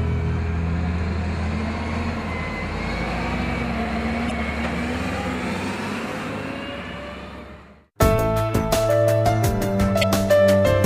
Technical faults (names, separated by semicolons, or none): damaged data in a compressed stream